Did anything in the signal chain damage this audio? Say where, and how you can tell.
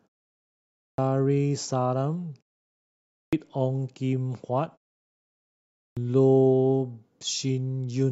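Yes. The playback device sleeps through silence and is slow to wake, causing a clipped start after a pause. Speech resuming at 0.54, 2.92 and 5.58 s, after pauses of 0.54 to 0.89 s, begins abruptly, with its first 0.39 to 0.44 s swallowed.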